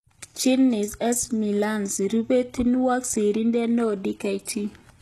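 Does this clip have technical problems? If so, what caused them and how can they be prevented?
Yes. Throughout the speech, the treble sounds bright but synthetic: s sounds come across gritty and lisping, with a metallic sheen, and nothing is present above 12.4 kHz. The likely cause is HE-AAC compression at a very low bitrate, consistent with about 16 kbps. Only the lower spectrum is coded, and the upper bands are rebuilt by copying lower ones upward, so their harmonics fail to match the originals. Prevention: encode speech at a higher bitrate with plain AAC or Opus.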